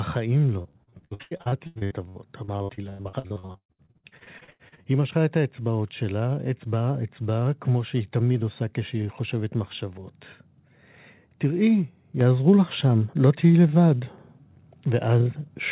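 From 0.62 to 4.83 s the speech turns choppy and robotic, with dozens of short holes, the longest about 118 ms, and nearly half the stretch filled by smeared continuation. This is repeated packet loss: audio arrived late or not at all, and each gap was patched by extending the last sound.

At 12.21 s the speech and background jump up together by about 6 dB in a single step. This is the microphone volume being stepped up: the call software judged the input too quiet and raised the device's gain at once, over a path carrying nothing above 4 kHz.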